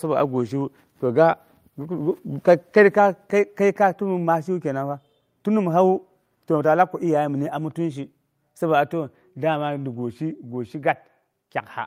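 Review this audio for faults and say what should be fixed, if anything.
Nothing here needs fixing: the speech signal holds steady throughout, with no dropouts, level jumps or added noise to trace back to the recording or playback chain.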